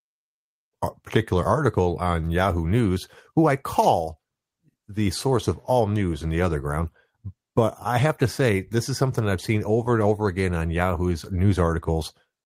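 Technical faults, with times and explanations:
Nothing in this speech recording stands out as a technical problem, so there's nothing to flag here.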